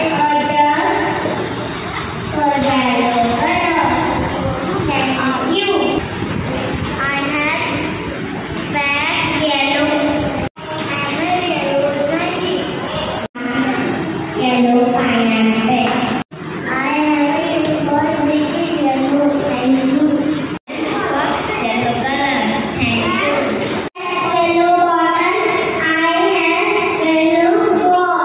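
Nothing goes wrong anywhere in this one; there are no technical faults to point out.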